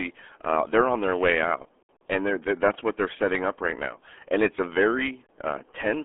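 Throughout, the speech has passed through the RealAudio 14.4 codec, whose heavy coding damage fits an 8 kbit/s dial-up coder. It keeps only a narrow 250 Hz to 3.4 kHz band with nothing above 3.8 kHz, leaving the speech muffled and gargly.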